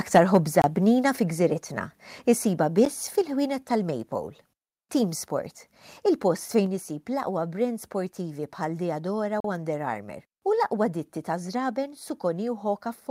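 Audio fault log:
0.62–0.64 s, 2.85 s, 9.40–9.44 s: block of digital silence. The sound cuts out for 23 ms, 10 ms and 40 ms with no fade. The shortest registers as a tick, the longest as a brief hole. This points to output buffers not being filled in time.
3.21 s: microphone volume stepped down. The sound and its background fall together by about 4 dB in a single step. Likely the call software judged the input too hot and cut the device's input gain at once.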